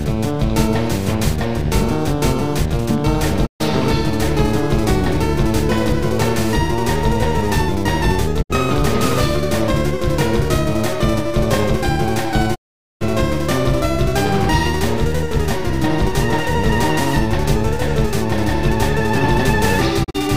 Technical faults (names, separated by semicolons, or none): digital broadcast dropout